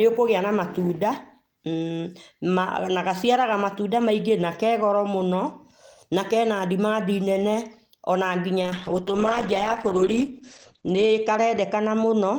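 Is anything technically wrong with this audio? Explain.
Yes. From 8.63 s to the end there is a call bitrate drop. The encoder gets far fewer bits, which fits a fall from 32 to 10 kbps. Coding coarsens and the top band shrinks from 20 kHz to 8 kHz. The speech turns muffled and rough, bottoming out for 2.65 s.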